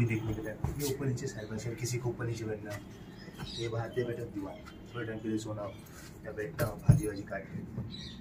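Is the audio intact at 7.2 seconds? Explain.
Yes, the audio at 7.2 seconds is intact, with no dropout, click, distortion or other fault heard at that point.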